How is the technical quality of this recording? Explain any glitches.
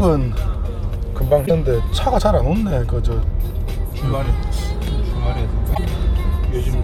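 Two brief glitches mar the recording, both from damaged data in a compressed stream, at 1.43–1.51 s and 5.71–5.78 s. Corrupted bytes garble the frames and the decoder loses sync, producing a short, abrupt break in the sound.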